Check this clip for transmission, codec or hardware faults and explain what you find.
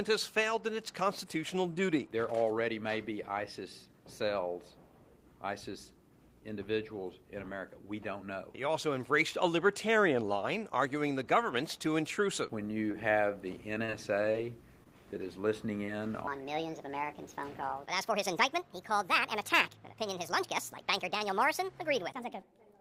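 There are three kinds of fault here, all packed into the back half of the clip.

Short concealed packet loss at 12.91, 13.85, 14.32 and 15.86 s: about 20 ms went missing each time, and the decoder patched it by extending the previous sound, leaving brief smears or wobbles.

Short stall from a late packet at 14.84 and 16.08 s: the jitter buffer ran dry for about 18 ms, so a sound hangs on slightly too long with a faint buzz or dip before resuming.

Section at the wrong speed from 16.27 s to the end: everything plays 1.5 times too fast and roughly seven semitones higher, hurried and chipmunky, likely from playback against a mismatched clock.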